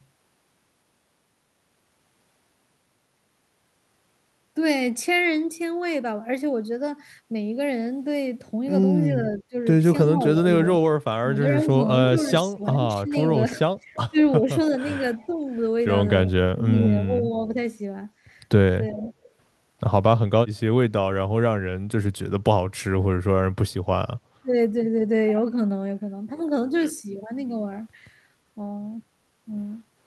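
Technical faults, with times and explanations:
9.09–19.04 s, speech suppressed in double talk: the echo canceller likely mistook overlapping talk for loudspeaker echo and turned its own talker down, so the speech dips by up to about 15 dB, losing around three seconds in all in pieces.
12.7–16.84 s, echo leak: an echo canceller likely let loudspeaker pickup through, so a delayed copy of the speech returns about 355 ms late, roughly 15 dB below the direct sound.
18.89–19.3 s, echo leak: the same likely residual echo path briefly reopens, bringing back a faint scrap of speech about 368 ms late and some 25 dB down.
24.42–24.53 s, speech suppressed in double talk: a brief overlap likely triggered the canceller's suppression again, cutting the speech by about 20 dB for roughly 0.1 s, a quick dropout.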